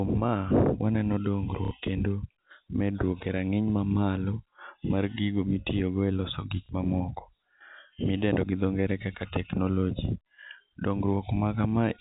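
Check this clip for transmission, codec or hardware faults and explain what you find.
Two brief dropouts are concealed by packet loss with the last packet repeated, over telephone-band audio cut off at 4 kHz. The first runs from 1.65 to 1.71 s, about 60 ms. The second runs from 6.66 to 6.69 s, about 30 ms, just after "gigo mitiyogo eloso gik". Lost packets were filled by replaying the previous one. The replay seldom lines up with the pitch cycle. The first is a short robotic stutter, the second a small blip. The lengths fit 30 ms packets.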